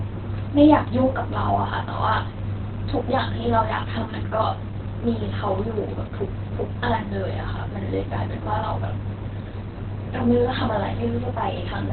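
Opus compression runs throughout. Nothing survives above 4.3 kHz, and the muffled, hoarse texture fits heavy, likely Opus speech-mode (SILK) coding at a very low bitrate, around 12 kbps.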